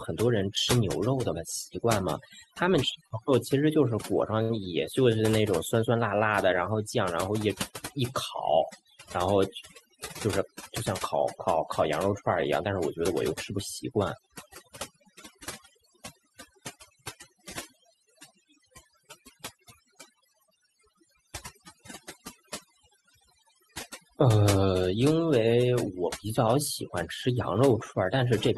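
Overdone noise removal runs through the whole recording. The suppressor, set too aggressively, pulls individual frequency bands down to nothing whenever they sit near its noise estimate. The background drops and breaks up into twinkling specks.

At 3.07 s and again at 4.42 s there is a short stall from a late packet. Each time the jitter buffer ran dry and the receiver extended the last sound, by 31 ms and then by 71 ms, before resuming where it left off. Nothing is lost, but each sound is held slightly too long.

From 15.75 s to 16.91 s a jitter buffer speed-up trims the excess delay. Short pitch-period slices, about 50 ms in total, are cut out in succession. The speech runs at 104% speed with unchanged pitch.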